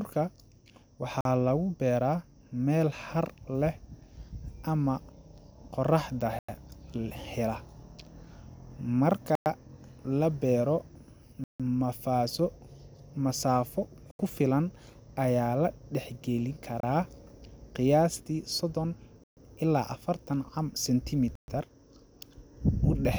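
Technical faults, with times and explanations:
1.21 to 21.35 s, Bluetooth stalls: radio interference likely held back audio packets, so the headphones' buffer emptied and playback halted until retransmissions arrived. Each stall cuts the speech to abrupt silence before it resumes, at 1.21 s (44 ms), 6.39 s (96 ms), 9.35 s (107 ms), 11.44 s (157 ms), 14.11 s (79 ms), 16.80 s (29 ms), 19.24 s (134 ms) and 21.35 s (127 ms).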